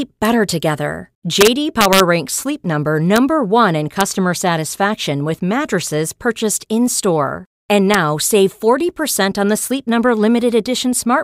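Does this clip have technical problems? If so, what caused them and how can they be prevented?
Yes: integer overflow cracks at 0.25, 1.41–2.00, 3.16, 4.01 and 7.94 s, where speech peaks exceeding the limit by up to about 1 dB wrapped to opposite sign. Use saturating arithmetic or limit gain before integer conversion.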